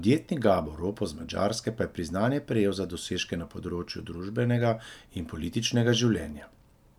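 Listening to this speech recording, nothing stood out as a technical problem at any point.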